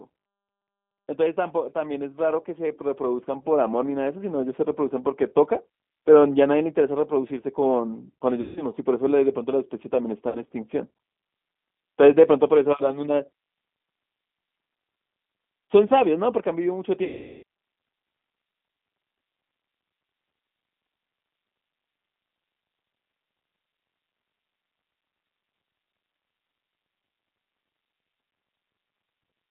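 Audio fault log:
Throughout: G.729 codec. The speech sits in a narrow line band of roughly 200 Hz to 3.5 kHz, with nothing above that edge. The damage is plainly audible: a rough, slightly synthetic texture, and the sound of an 8 kbit/s G.729A-type coder. That codec rebuilds each frame from a vocal tract filter, a pitch predictor and a few coded pulses instead of the actual waveform, so fine detail between the pulses is lost and replaced by a synthetic approximation.
1.73 to 5.25 s: automatic gain rising. Over about three and a half seconds the level climbs by about 10 dB, with the speech and the background swelling together. An automatic gain control judged the input too quiet and raised its gain gradually. Because the gain acts on the whole signal, the noise floor rises in step with the voice. The slow ramp distinguishes it from someone simply speaking louder.
8.41 to 8.64 s, 10.29 to 10.40 s, 17.04 to 17.43 s: VoIP packet loss concealed by the speech codec. 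These three dropouts cover about 150 ms, 60 ms and 390 ms of lost audio. The gap at 8.41 s points to several consecutive packets, and the one at 17.04 s points to a long burst. In each gap the decoder keeps extrapolating from its last pitch and filter while lowering the gain frame by frame. The result is a stretched, buzzy tone or coloured noise that fades. The weakened sound lingers briefly after audio resumes, because each decoded frame builds on the previous one.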